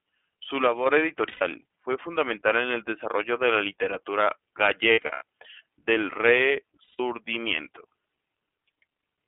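Speech runs through the iLBC codec for its whole length, band-limited to roughly 250 to 3400 Hz, with plainly audible roughness and a synthetic edge that fits 30 ms frames at about 13.3 kbps. Unlike a simple telephone filter, the coding itself adds that grainy texture. A loudspeaker feedback squeal appears from 0.42 to 0.97 s as a single 6 kHz tone that swells over about a third of a second to around 15 dB above the speech. A steady interference tone would instead hold one level from the start. Lost iLBC frames occur at 1.28 to 1.42 s (120 ms), 4.91 to 5.22 s (210 ms spread over about 300 ms, with the longest run near 100 ms), and 6.84 to 7.00 s (150 ms). Each gap becomes a held, slightly buzzy vowel where the decoder repeats the last pitch cycle, which fits runs of 30 ms frames. Because each frame decodes independently, the sound recovers almost immediately, unlike the longer smeared recovery of codecs that depend on earlier frames.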